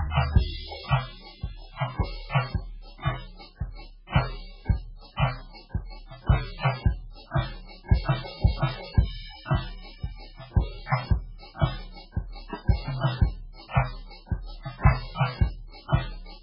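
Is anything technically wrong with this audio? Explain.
Yes. Throughout the music, nothing is present above 5.3 kHz, and the sound is watery and swirling. The likely cause is heavy MP3 compression at a very low bitrate, around 8 kbps. A spectrogram shows a flat ceiling with flickering holes below it.

There is pre-echo at 13.7 s and 15.88 s. Block-spread quantisation noise leaks ahead of the attacks, as a short hiss lasting 58 ms and 37 ms. On a waveform, fuzz appears before each onset.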